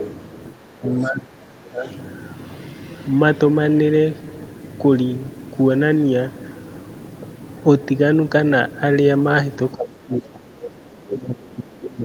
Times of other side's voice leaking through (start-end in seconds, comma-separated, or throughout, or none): 0.00-0.11, 0.85-1.08, 1.84-1.92, 11.10-11.17